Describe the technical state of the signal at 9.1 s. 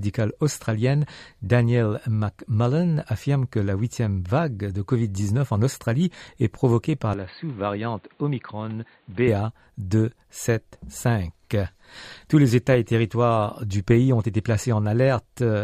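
Dull and boxy, with nothing above 4.5 kHz, slightly quieter and with a faint new hiss, from 7.14 to 9.28 s after "est provoquée par": likely an input switched to a poorer device.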